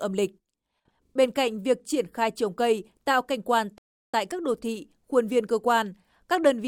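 At 1.05 s, running to 1.13 s, the speech stutters: a 40 ms stretch of audio is played back twice more than it should be, which points to a run of repeated frames in the compressed stream, probably a pair of frames. The decoder plays the same material again, and the clip is lengthened by 80 ms. It sounds like a brief mechanical hiccup rather than a natural hesitation.

At 3.78 s, just after "cây tạo cảnh quan", the output drops to silence for about 353 ms and resumes at 4.14 s with "tại các đô thị". This is a playback stall, likely caused by the player running short of data or having its audio thread held up, so that nothing reached the output until it caught up.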